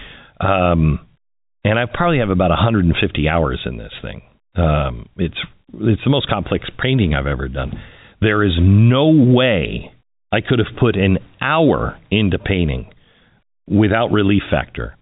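No faults can be heard in this speech clip.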